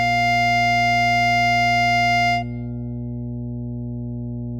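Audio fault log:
throughout, mains hum: a ground loop or a nearby transformer is letting the 60 Hz power line couple into the signal path, so a steady low tone at 60 Hz sits under the music from start to finish, with some low harmonics above it. It is strong, around 10 dB below the music.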